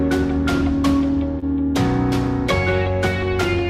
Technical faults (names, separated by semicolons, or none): short concealed packet loss